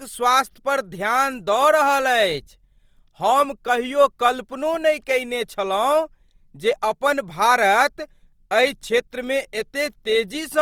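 A speech recording that carries Opus-style compression damage from start to finish, and it's plainly audible. Rather than the swirly holes you'd get from MP3, the voice sounds grainy and rough, with a noisy texture in the upper bands, which is what you get when the encoder runs short of bits and fills bands with noise or folded copies of lower ones. The cause is likely a low bitrate, around 24 kbps, in Opus's music mode. Bandwidth stays full, reaching about 20.2 kHz.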